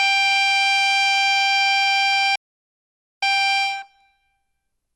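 The music has generation loss from start to end. It sounds swirly, smeared and hollow, and attacks blur. Nothing reaches above 12 kHz. The likely cause is repeated lossy re-encoding, perhaps four passes, each adding quantisation noise. The sound points to MP2 at 96 kbit/s.

At 2.35 s there is a playback stall. The music cuts to silence mid-flow and returns at 3.23 s, a gap of about 0.87 s. The player likely ran short of data or was blocked, then resumed.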